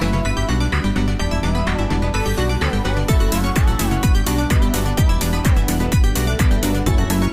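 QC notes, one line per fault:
Nothing to flag here; I listened to the whole thing and didn't hear any technical problems worth a line.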